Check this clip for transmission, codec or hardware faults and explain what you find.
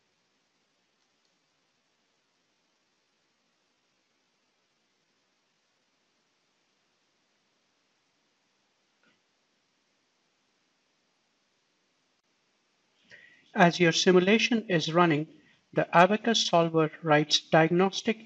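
Yes, there are two kinds of fault here.

From 0.0 to 5.96 s there's a time-stretched section. The pace drags at about 0.74 times normal speed while the pitch holds. That's likely software padding the audio to fill a length by repeating short pieces.

Then there's damaged data in a compressed stream, heard as brief glitches at 6.70, 14.12 and 16.34 s. Bad bytes in the encoded frames throw the decoder out of sync until it finds the next frame header.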